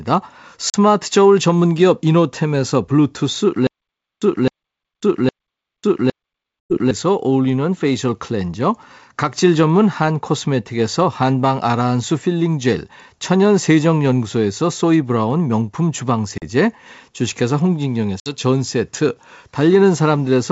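Speech on a wideband call is interrupted four times by packet loss on an ADPCM call. Hard-edged holes appear at 0.70–0.75 s, 6.65–6.79 s, 16.38–16.43 s and 18.20–18.36 s. The missing audio amounts to 40, 100, 40 and 60 ms. That fits a couple of packets at a time, rising to about five at 6.65 s. Each gap is filled with silence. Meanwhile the decoder's predictor and step size drift from the sender's. So the speech comes back slightly distorted, which settles within tens of milliseconds. From 3.67 to 6.91 s there is a stutter with silent gaps. A 263 ms fragment plays four times at an even 810 ms pace, with about 547 ms of digital silence between repeats. The likely cause is a stalled stream replaying its last buffer on each retry. The speech that should fill that span is lost.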